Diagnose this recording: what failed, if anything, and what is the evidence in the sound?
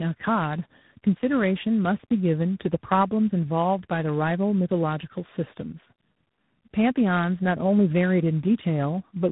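Tandem speech coding runs throughout the speech, a codec-stage fault. The audio has a telephone-band ceiling, with nothing above about 3.9 kHz, and carries two layers of coding damage: the warbly, smeared texture of a low-rate mobile coder, then the grainy roughness of ADPCM. That fits AMR-NB passed over a G.711 leg into G.726 at 24 kbit/s. Each coder re-encodes the previous one's errors, so the speech ends up more muffled and rougher than either alone.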